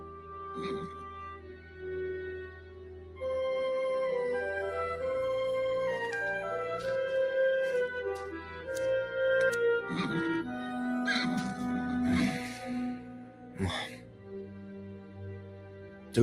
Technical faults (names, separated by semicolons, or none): noise suppressor applied to music or sounds; sound cut by the noise suppressor